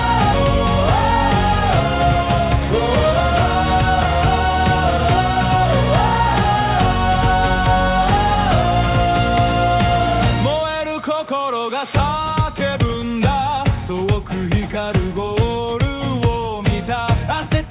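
At 0.34 to 0.36 s the audio makes a skip ahead: roughly 0.7 s of sound is simply gone, and the material on either side is butted together with no silence and no filler in between. Later audio was already queued, so playback jumped forward and the delay shrank by about the same amount. Unlike a dropout or a concealed packet loss, there is no gap, mute or smeared patch, just an abrupt splice where content vanishes.

From 1.61 to 2.19 s a jitter buffer speed-up follows. The receiver was holding more audio than it wanted and trimmed it by cutting out many short pitch-period pieces in quick succession, removing around a tenth of a second in total. The passage runs at about 113% speed and sounds hurried, yet its pitch stays put. That distinguishes it from a resampling or clock-rate error, where speed and pitch rise together. Throughout the clip the call path's band limit leaves nothing above 4 kHz, consistent with a narrowband G.711 mu-law telephone codec.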